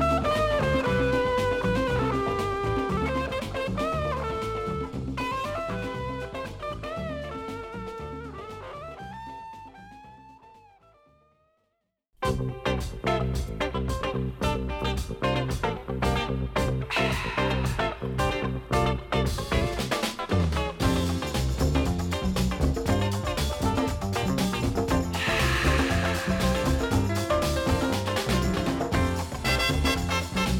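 No technical faults are audible anywhere in the audio.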